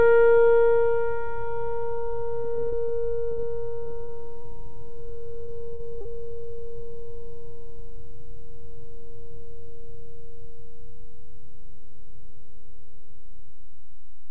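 A DC offset runs through the whole music clip. The waveform sits shifted off zero, which is inaudible as a tone, unlike hum, but uses headroom and shows as steady energy at the very bottom of the spectrum.

From 2.42 to 2.90 s comes repeated packet loss with its robotic sound. Five short gaps, the longest 22 ms, are each patched by extending the last sound, so the music turns choppy and robotic instead of dropping out once.

From 3.32 to 3.40 s a burst of packet loss removes about 60 ms in one piece. A held, fading continuation of the last sound is heard, then the music jumps ahead: a single hole, not a stutter.

Repeated packet loss returns from 3.84 to 4.46 s. Four gaps of up to 35 ms bring back the same chopped, robotic texture.

Short concealed packet losses follow at 5.46 to 5.50 s, 5.76 to 5.81 s and 6.01 to 6.07 s, each 20 to 40 ms. They leave only a brief smear or wobble.

The call path itself keeps everything below 8 kHz, which fits G.722 at 64 kbps.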